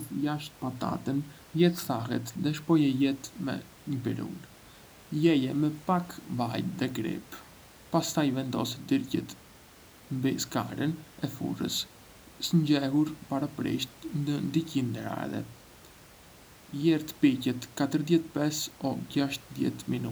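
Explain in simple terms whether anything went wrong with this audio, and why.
Nothing went wrong with this speech recording; the faint background noise sitting well beneath the talking comes from the room itself, not from the system.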